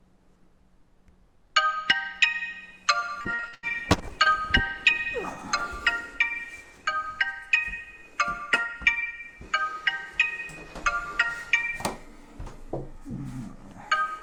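From 2.99 to 4.27 s there's repeated packet loss, giving that robotic sound: a quick run of short holes, the longest about 84 ms, each patched by stretching the last bit of audio. About a fifth of that stretch is filler, so it turns choppy.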